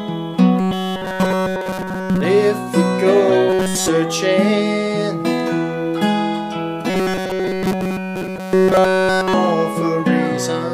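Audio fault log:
0.60 to 2.21 s, 3.50 to 3.88 s and 6.90 to 9.34 s, robotic sound from repeated short buffers: the sound turns into a rigid, metallic buzz pinned at 188 Hz, still tracing the rough shape of the audio but losing its natural detail. The likely cause is audio arriving too seldom, so the playback repeats a snippet of about 5.3 ms over and over in place of nearly all the real signal. That fixed loop length imposes the steady buzz pitch.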